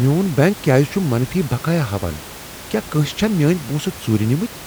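Nothing stood out on listening to the speech, apart from a low room noise sitting about 17 dB beneath it that belongs to the recording itself.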